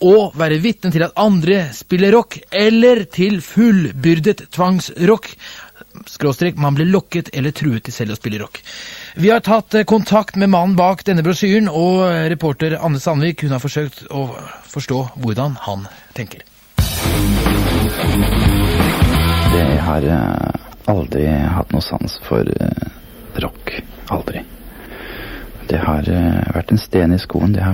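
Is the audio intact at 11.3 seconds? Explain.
No. At 11.3 seconds the sound falls within a stretch of pre-emphasis left on that runs from 0.0 to 19.63 s. The treble lift applied before storage was never undone by the matching de-emphasis, so highs sit about 8 dB above 1 kHz at 10 kHz, a shape that fits the CD 50/15 µs curve. It sounds thin, bright and hissy. Unlike a dynamic harshness, the lift is a fixed, steady shelf that never varies with level.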